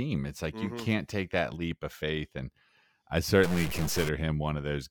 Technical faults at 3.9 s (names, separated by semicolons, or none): stuck bit